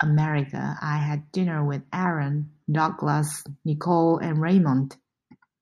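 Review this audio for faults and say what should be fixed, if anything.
Nothing needs to be fixed, as there are no faults in this audio.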